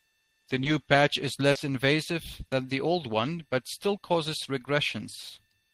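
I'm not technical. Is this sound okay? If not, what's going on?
No. There are three moments of short concealed packet loss, at about 0.63, 1.51 and 2.47 seconds. Each time, a small piece of the speech, 20 to 40 milliseconds, arrived too late to be played. The receiving end covered each gap by stretching out the sound just before it and then easing back into the real audio. You hear this as a quick smear or wobble, and a short sound inside the gap can drop out.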